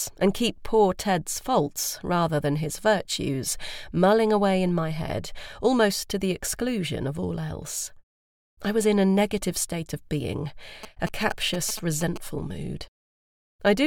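GSM signalling bursts run from 10.83 to 12.18 s. A nearby 2G phone is exchanging short groups of radio bursts with the network while in a signalling state, and the audio circuitry rectifies that RF into the sound path. The result is a galloping dit-dit-dit of short buzzes pulsing at 217 Hz, sitting roughly 10 dB below the wanted audio.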